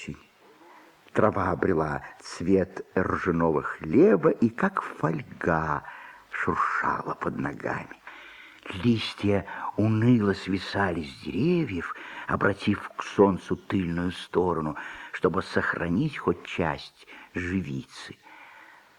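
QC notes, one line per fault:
No faults found. Nothing in the audio calls for a time or range on this line.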